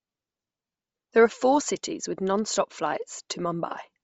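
Throughout the speech, the upper frequencies sound grainy and breathy, with plainly audible noise standing in for real detail. The cause is likely Bluetooth LC3 compression. Starved of bits, the encoder discards upper bands and refills them with noise. That fits 32 kbps in 7.5 ms frames.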